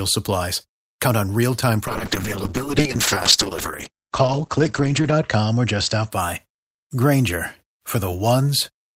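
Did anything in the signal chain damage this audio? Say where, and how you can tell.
Yes. Just after "on real time", from 1.88 to 6.16 s, a call bitrate drop hits the codec. The bandwidth shrinks from 20 kHz to 8 kHz and the sound turns coarse and watery, worst for 3.25 s, which fits 64 kbps falling to 12 kbps. Unlike packet loss, nothing drops out.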